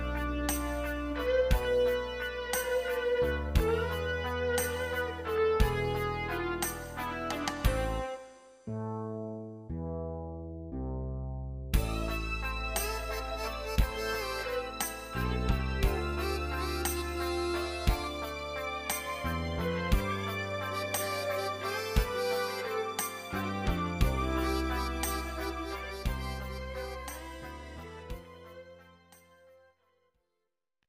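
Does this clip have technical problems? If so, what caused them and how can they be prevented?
No, nothing stood out as a technical problem on listening to this clip.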